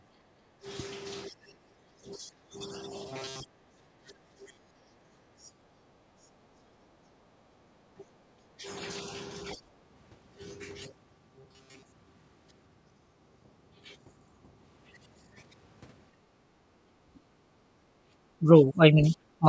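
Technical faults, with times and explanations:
1.39–1.49 s, 2.06–2.57 s, 4.46–4.58 s and 18.39–19.46 s, speech suppressed in double talk: the speech dips sharply, by roughly 25 dB in the first three and a shallower 15 dB or so in the last. This is likely the echo canceller mistaking the talker for loudspeaker echo while both sides spoke, and turning everything down.
3.09–5.05 s and 10.84–11.98 s, robotic sound from repeated short buffers: the speech becomes a rigid metallic buzz at 133 Hz that loosely tracks the speech, with most of the audio replaced. This is likely a short chunk being looped when fresh audio arrived late, which fits a buffer of about 7.5 ms.
3.43–4.18 s, 16.12–16.32 s and 17.22–18.12 s, background gated by the echo canceller: the room sound drops out abruptly, by about 21, 18 and 20 dB respectively, then returns. The canceller clamped the microphone while the loudspeaker played and released it afterwards.
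5.46–5.50 s, other side's voice leaking through: a brief, very faint scrap of a second voice, about 35 dB below the talker, surfaces. It is likely loudspeaker playback the echo canceller failed to remove completely from the microphone.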